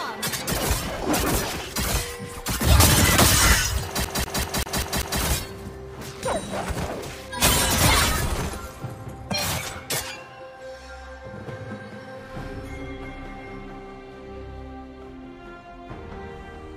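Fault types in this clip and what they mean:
CD stuck on one turn: from 4.05 to 5.21 s the same 0.19 s stretch of audio repeats six times, each pass cut by a brief mute as the laser jumps back a track at a scratch, giving the rapid, evenly spaced stutter of a skipping disc.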